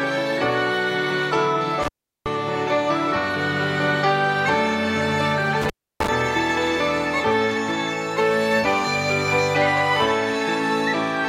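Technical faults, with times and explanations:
1.83–2.27 s and 5.62–6.09 s, intermittent contact: the signal drops out twice, for about 0.38 s and then about 0.31 s, with a brief crackle as each gap opens and closes and faint hiss in between. A loose plug or cable connection is momentarily breaking and remaking contact, so the audio path goes open for a fraction of a second while the rough, unstable contact at each transition produces the crackle.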